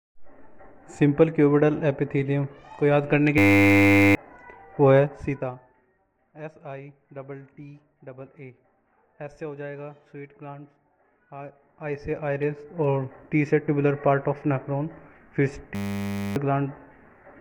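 System hang loops at 3.38–4.15 s and 15.75–16.36 s replace the audio with a steady 100 Hz buzz. The output froze while the hardware kept replaying one 10 ms slice of its buffer, and each time roughly 0.7 s of sound is lost. Zipper noise runs from 4.97 to 6.14 s, where the level falls by about 20 dB in 1 dB steps at around 15 per second, and again from 11.41 to 12.85 s, as it rises by about 20 dB at around 10 steps per second. Each unsmoothed step adds a tiny click, heard as a ticking over the sound.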